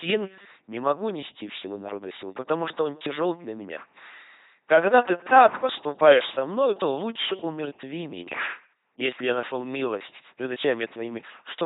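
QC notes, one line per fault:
Throughout, LPC-10 vocoder: the speech has been reduced to a crude parametric model. Each frame is rebuilt by passing either a buzz of pulses or a hiss of noise through a short all-pole filter standing in for the vocal tract, never a mix of the two. The result is a heavily damaged, buzzy, robotic voice, with no content above 3.9 kHz, consistent with a 2.4 kbit/s rate.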